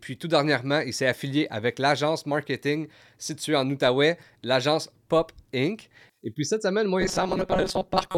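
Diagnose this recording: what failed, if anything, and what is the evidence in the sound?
From 7.01 s, just after "puis cette semaine moi", to the end at 8.18 s, the speech turns into robotic sound from repeated short buffers: a rigid metallic buzz near 188 Hz that still loosely follows the syllables. The likely cause is a driver or buffer underrun, replaying a fragment of about 5.3 ms in place of missing audio, with roughly half the signal being repeats. The steady fixed pitch, rather than silent gaps or smeared codec warble, sets it apart from dropouts.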